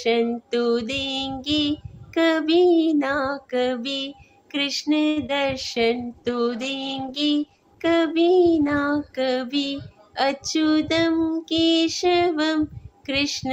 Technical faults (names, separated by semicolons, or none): short stall from a late packet; short concealed packet loss; call bitrate drop; jitter buffer speed-up